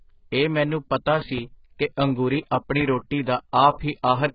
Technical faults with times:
0.00-4.34 AAC compression
1.22-1.40 loud pop
2.81-2.84 loud pop

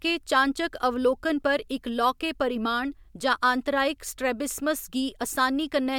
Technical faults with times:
none

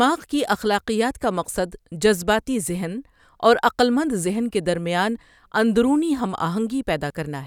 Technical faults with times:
none

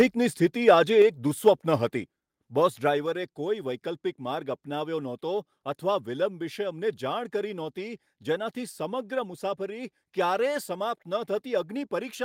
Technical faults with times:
1.02 microphone volume stepped down
1.47-1.49 microphone overload
2.04 microphone volume stepped down

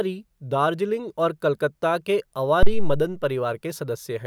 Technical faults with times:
2.63-3.13 phantom power thump

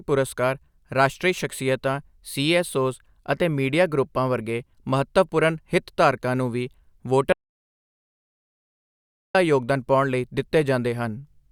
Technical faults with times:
7.33-9.35 audio dropout to silence

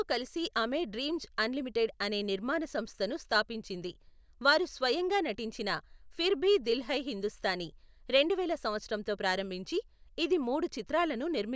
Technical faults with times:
none

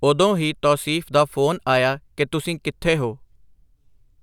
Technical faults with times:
none

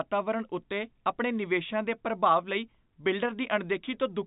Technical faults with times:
none

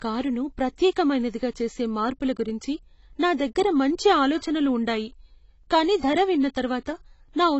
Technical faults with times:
0.00-7.59 AAC compression

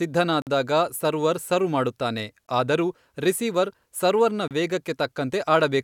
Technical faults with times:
0.42-0.47 gap between stream segments
2.47 gap between stream segments
4.48-4.51 gap between stream segments

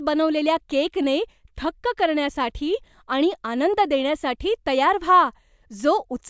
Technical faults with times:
none

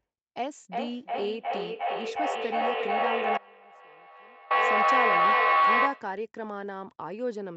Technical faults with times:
0.37-6.23 feedback howl
3.38-4.50 audio dropout to a faint residue

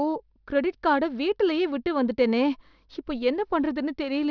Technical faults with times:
0.00-4.31 aliasing

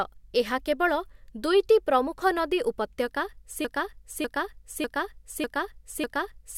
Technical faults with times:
3.65-6.58 broken-record loop

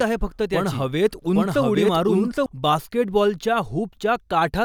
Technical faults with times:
0.00-2.46 doubled audio track

